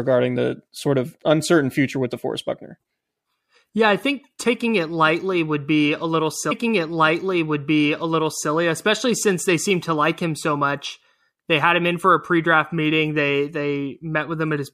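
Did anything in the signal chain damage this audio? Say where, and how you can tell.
Yes. A stream segment repeated at the streaming playback stage. After "would be a little", a small blip at 6.50 s marks a jump back. About 2.0 s of speech replays until 8.50 s, then "especially since they seem" follows. The player fetched or queued one segment twice.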